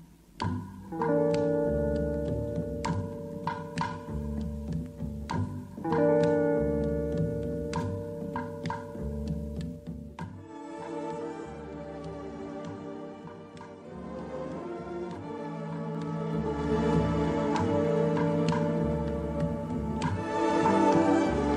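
From 9.52 to 10.64 s the level drops by about 15 dB in audible 2 dB steps, roughly seven a second, with no smoothing, producing zipper noise. It returns from 15.88 to 16.77 s. Each step ticks, visible as a staircase envelope and thin vertical broadband lines.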